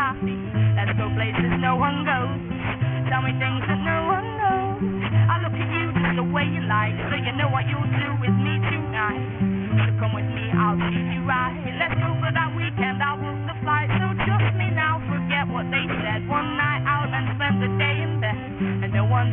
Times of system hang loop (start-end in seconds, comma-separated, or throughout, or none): none